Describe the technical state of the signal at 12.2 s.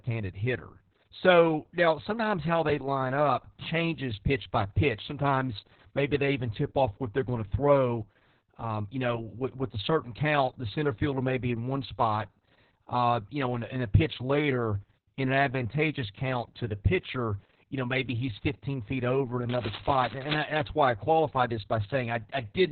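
At 12.2 s the speech carries Opus voice compression, present across the whole clip. The band sounds cut to about 4 kHz. The excitation is coded coarsely, which fits SILK at roughly 6 kbps. The voice comes out heavily muffled, hoarse and slightly robotic.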